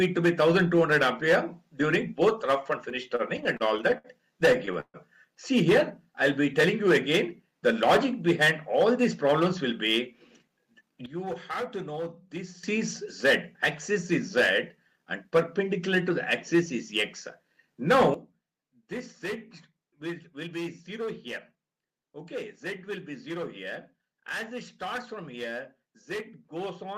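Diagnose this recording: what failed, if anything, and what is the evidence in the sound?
Repeated stalls (stutter) from 2.89 to 4.97 s. This is a network and jitter buffer fault. The buffer ran dry 15 times, and the receiver stretched the last sound across about 367 ms in total. The longest hold was 139 ms. Nothing is lost, but the audio drags and stammers.

Jitter buffer speed-up runs from 9.15 to 10.95 s at 107% speed and again from 20.47 to 21.08 s at 105%. The receiver trimmed short pitch-period slices to drain excess buffered audio. About 150 ms and 40 ms were removed. Pitch holds, but the audio sounds hurried.

Sudden gain jumps occur at 11.06 s and 18.14 s. The sound and its background noise drop together by about 12 dB and about 13 dB. The first drop recovers at 12.64 s. The second lasts to the end. The likely cause is a digital gain change applied without a ramp.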